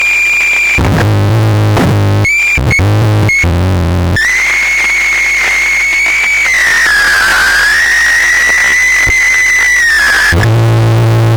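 From 5.82 s to the end at 11.37 s, a time-stretched section slows the audio to about 0.54 times its pace while pitch holds steady, so the sound drags, likely from software repeating short pieces to lengthen the passage without changing pitch.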